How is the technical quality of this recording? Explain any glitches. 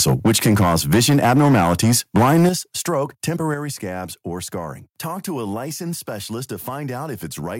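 The recording has two related problems in its first few seconds: an overloaded microphone and three sudden drops in input level.

From 0.0 to 2.49 s, the input gain was likely set too high, driving peaks about 7 dB past the converter's ceiling. Roughly a tenth of the samples have their tops sheared flat, giving the louder syllables a harsh, crackly, distorted edge.

At 0.27 s, 2.49 s and 3.54 s, the input level steps down abruptly, by about 2 dB, 8 dB and 6 dB. This is likely microphone volume being stepped down by call software reacting to the clipping. Both voice and background drop together, most noticeably at 2.49 s, where the distortion ends.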